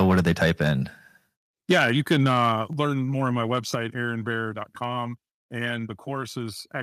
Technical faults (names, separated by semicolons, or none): microphone overload; microphone volume stepped down